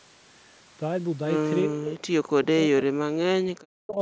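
The speech dips sharply, by about 40 dB, and breaks up from 1.64 to 2.87 s and again from 3.40 to 3.99 s, likely speech suppressed in double talk.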